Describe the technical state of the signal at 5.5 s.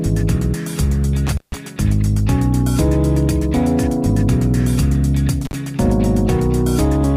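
At 5.5 s there is an intermittent contact fault, spanning 5.45 to 5.53 s. A loose connection briefly opens, cutting the sound for about 40 ms. Crackle marks the break and reconnection. Faint hiss remains while the line is open.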